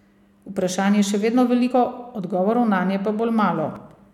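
At 1.70 to 1.72 s, between "je še vedno" and "odgovorov nanje", and again at 3.67 to 3.76 s, the speech skips forward by about 50 ms, a sign of compressed frames skipped: whole coded frames were lost or rejected by the decoder. Unlike a dropout, there is no silent gap; the audio jumps ahead.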